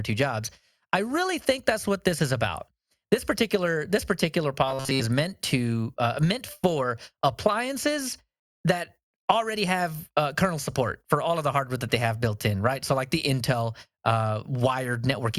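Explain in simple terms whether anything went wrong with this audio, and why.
Robotic sound from repeated short buffers appears from 4.67 to 5.01 s, where the speech turns into a stiff, metallic buzz pitched at 134 Hz. Most of that third of a second is made of repeats, which likely means new audio arrived too slowly and the software kept replaying its last tiny slice, about 7.5 ms long. The constant looping forces that single buzzing pitch onto the speech while the real sound in between is skipped.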